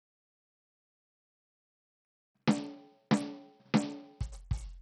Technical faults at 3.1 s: Bluetooth SBC compression

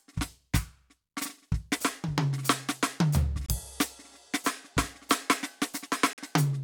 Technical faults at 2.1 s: none

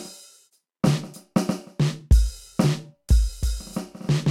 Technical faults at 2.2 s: none

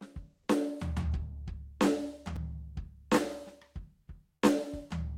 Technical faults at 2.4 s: block of digital silence

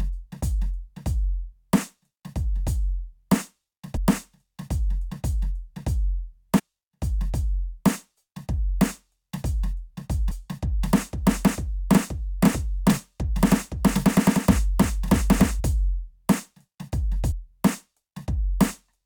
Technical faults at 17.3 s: compressed frames skipped

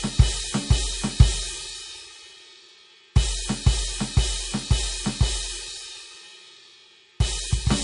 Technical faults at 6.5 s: MP3 compression

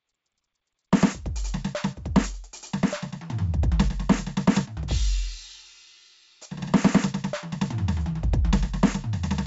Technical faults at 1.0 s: none

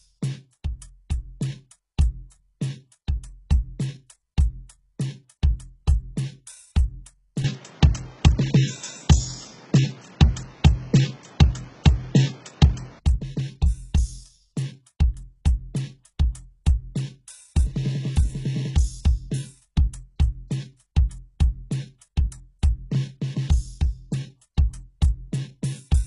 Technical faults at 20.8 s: HE-AAC compression; pre-echo

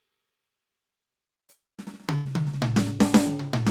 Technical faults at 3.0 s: none

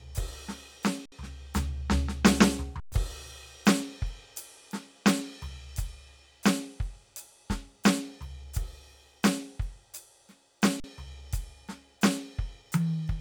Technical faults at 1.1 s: underrun with held sample

